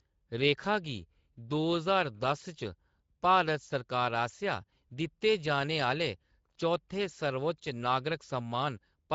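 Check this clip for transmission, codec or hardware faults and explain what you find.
There is one fault, and it runs through the whole clip: Speex codec damage. The damage is plainly audible. Speex is a CELP speech coder, and at this setting, which sounds like roughly 16.8 kbps, it has little budget for the excitation. The speech therefore comes out hoarse and grainy. Above 4 kHz the detail is replaced by a shaped noise fill, and nothing is present above 7.7 kHz. On a spectrogram the upper band looks smeared and diffuse and stops at a hard ceiling near 7.7 kHz.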